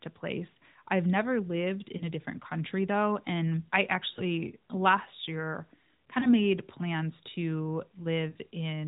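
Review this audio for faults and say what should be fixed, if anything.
Lost AMR speech frames occur four times: a brief warbling dip at 1.98–2.03 s between "place I've never lived" and "a different country though", another at 4.14–4.22 s just before "last year", one at 6.20–6.33 s, and a longer smeared fade at 8.30–8.37 s after "plans to", which fits a run of three 20 ms frames. The decoder repeats the last good pitch and vocal-tract settings at falling gain. On a spectrogram this appears as frozen, stretched harmonics, and on the waveform as a short envelope sag, all beneath the 4 kHz AMR narrowband ceiling. Stronger channel error protection or redundant frame transmission would prevent these losses.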